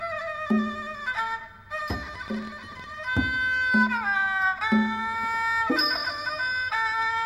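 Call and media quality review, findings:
Train of clicks, 2.16 to 3.17 s. Roughly ten sharp ticks of near-identical shape, about 10 per second, unevenly spaced. Peaks near the level of the surrounding sound, so clearly audible. Likely cause: nearby equipment interference or a faulty connection or power supply injecting repeated pulses.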